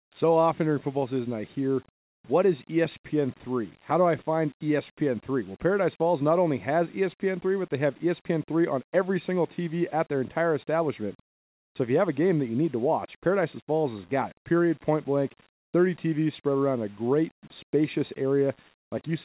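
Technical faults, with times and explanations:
No technical faults found in this speech recording.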